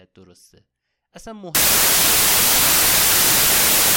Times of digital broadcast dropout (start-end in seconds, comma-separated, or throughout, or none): none